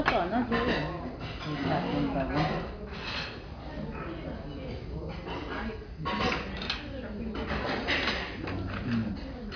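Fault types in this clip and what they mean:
No technical fault can be heard in this clip. The sounds in it carry no audible dropout, distortion or other transmission problem.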